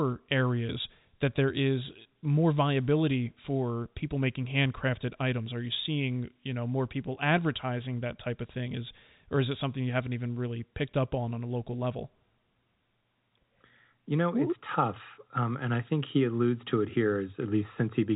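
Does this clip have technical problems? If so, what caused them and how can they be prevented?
No, nothing here needs fixing: the speech simply comes through ordinary G.711 telephone coding, so nothing sits above 3.8 kHz, which is just how a phone line sounds.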